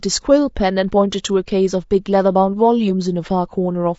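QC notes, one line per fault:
Throughout, low-delay AAC compression: the speech sounds rough and grainy, with noise filling the gaps between harmonics and a thin, artificial top end. That's likely AAC-ELD at a low rate, something like 32 kbps, where the short frames can't resolve pitch cleanly.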